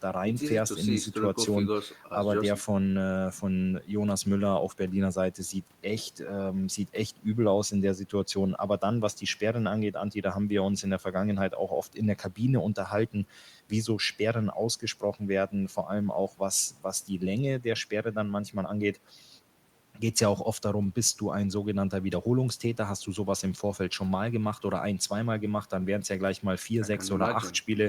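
A speech recording with no technical faults to report. Nothing in it calls for a time or a cause.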